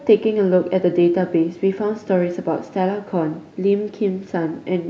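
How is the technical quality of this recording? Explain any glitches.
The recording has no technical faults to report. There are no glitches anywhere in the speech that need explaining.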